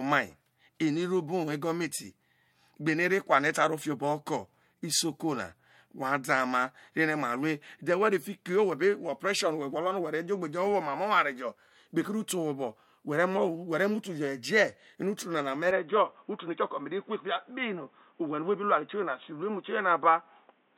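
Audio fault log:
15.71–20.78 s: input switched to a poorer device, likely. The sound suddenly dulls, with nothing above 3.8 kHz and faint new noise far below, without a gap or level jump.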